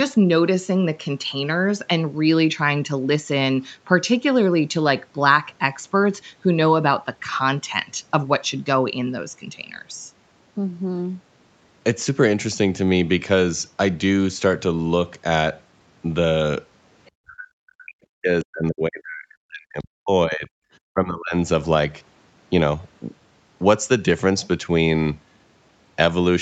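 At 17.05 to 17.11 s, a brief scrap of the other side's voice leaks through. It is very faint, far below the main speech. The likely cause is loudspeaker echo that the echo canceller did not fully remove from the microphone.

From 17.21 to 20.55 s, the speech is suppressed in double talk. The voice dips for about three seconds, at its worst almost to silence. The likely cause is the echo canceller muting the talker while both sides spoke. At 20.91 to 21.34 s, a shorter, shallower dip follows.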